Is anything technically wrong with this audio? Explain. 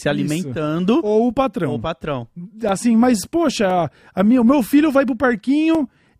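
Yes. Periodic USB or driver dropouts occur from 2.69 to 5.75 s, starting after "o patrão": about four gaps of roughly 2 ms, 1.024 s apart. Each time the driver stalls, samples are lost and replaced by silence, producing regular ticks. The waveform shows tiny flat notches, and the spectrogram shows thin vertical broadband lines.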